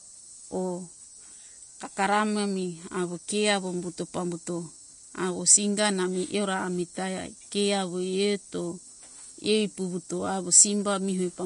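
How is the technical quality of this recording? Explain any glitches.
The speech carries audible coding damage from start to finish. Throughout, nothing sounds above 10.5 kHz, and the treble turns hissy and grainy. This is likely Vorbis compression at a low bitrate, around 35 kbps, coarsely quantising fine detail into noise.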